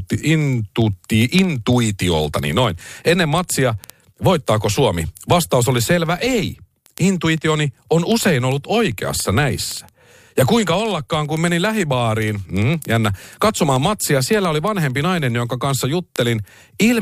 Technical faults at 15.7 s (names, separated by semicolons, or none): word clock ticks